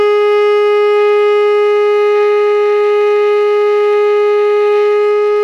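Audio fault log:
No audible faults found.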